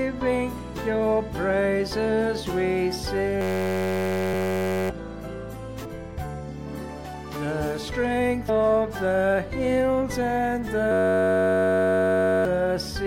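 Two faults recur in the audio. A system hang loop takes over from 3.41 to 4.90 s and again from 10.92 to 12.45 s. Each time, a 10.67 ms slice repeats exactly, well over a hundred times, which fits a 512-sample buffer being replayed while the system stalls. The result is a steady 93.8 Hz buzz that replaces about a second and a half of audio in each stretch. The waveform shows one identical short cycle tiled end to end. The spectrogram shows flat horizontal stripes at multiples of 93.8 Hz where the normal detail should be. Compressed frames skipped at 5.84 s and 8.48 s. The first jump drops around 200 ms, roughly seven 26.1 ms frames. The second drops about 100 ms, around four frames. The spectrogram shows a narrow vertical line with the content abruptly changing on either side, and the waveform shows a discontinuity.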